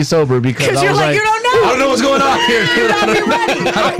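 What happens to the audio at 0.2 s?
At 0.2 s the loud parts sound harsh and fuzzy, with a gritty edge that stays on every peak. This is hard clipping, and it runs through the whole clip, not just that moment. The signal is pushed about 8 dB past what the stage can pass, so roughly a tenth of the samples hit the ceiling and are sliced flat. Those squared-off tops add high harmonics that the ear hears as that persistent buzz.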